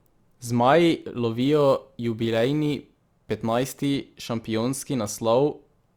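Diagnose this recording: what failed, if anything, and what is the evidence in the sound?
The failure is at the sample-rate conversion stage: crude rate conversion from 1.41 to 3.86 s. Samples were repeated without a filter, which fits a 44.1 to 48 kHz change. This leaves a gritty, inharmonic fizz roughly 30 dB below the speech. Unlike codec artefacts, the fizz doesn't pulse with frames but follows loud, bright sounds.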